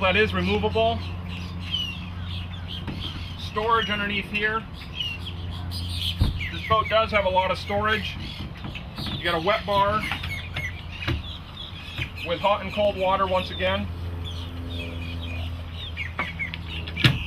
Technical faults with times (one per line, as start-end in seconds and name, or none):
0.55-16.95 clock drift buffer slips